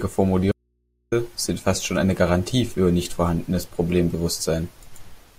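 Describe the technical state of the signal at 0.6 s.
At 0.6 s the speech is in an audio dropout to a faint residue from 0.52 to 1.12 s, likely a lost feed on a live path, leaving only hum around 50 dB down. The waveform collapses abruptly to a near-flat line, and the spectrogram goes blank except for thin, steady hum lines.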